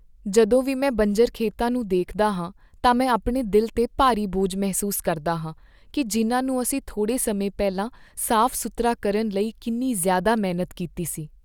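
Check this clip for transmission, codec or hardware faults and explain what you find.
Nothing in this speech recording points to a fault anywhere along its path. There is nothing here that calls for an explanation.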